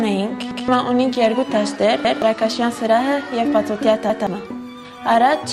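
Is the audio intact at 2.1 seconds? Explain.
No. A repeated buffer runs from 2.05 to 2.22 s. Fresh audio arrived late, so the device replayed its last block of about 171 ms (which fits an 8192-sample buffer) once more. The sound stutters, with a hard join at the repeat, and roughly 150 ms of audio goes missing.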